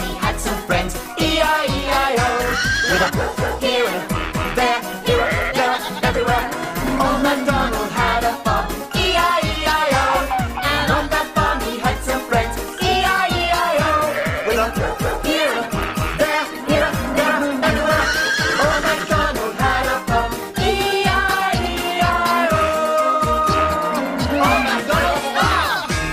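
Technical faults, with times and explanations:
13.26–18.81 s, call bitrate drop: the sound turns coarse and watery, with the top end dulled for about 5.5 s before clarity returns. The encoder was pushed to far fewer bits, consistent with a fall from about 64 to 19 kbps, coding more roughly and trimming high frequencies.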